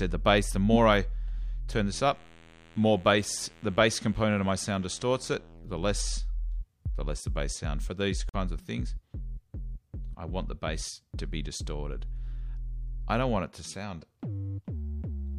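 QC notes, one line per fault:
8.29–8.35 s, corrupt frame muted: the sound drops abruptly into dead silence for about 56 ms, then resumes with no shift in timing. A bit-damaged compressed frame, likely two consecutive frames given the length, was rejected by the decoder and replaced with silence.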